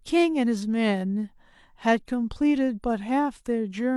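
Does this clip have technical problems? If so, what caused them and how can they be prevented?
No, nothing in this one trips me up, so there's nothing here that needs fixing or preventing.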